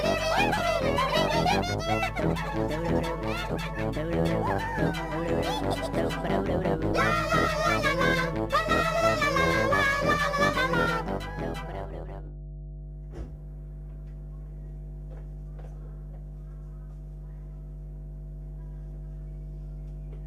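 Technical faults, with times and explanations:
Throughout: mains hum, a steady 50 Hz tone about 10 dB below the signal, where power-line current has leaked into the audio path. A spectrogram shows a constant horizontal line at 50 Hz, with a few low harmonics stacked above it.
0.57–0.60 s, 3.49–3.52 s, 5.11–5.14 s, 12.27–12.31 s, 14.45–14.47 s and 16.89 s: compressed frames skipped. At each point the audio jumps ahead by roughly a tenth to a fifth of a second, which fits several 20 ms frames never being decoded. The join shows as a vertical seam on the spectrogram.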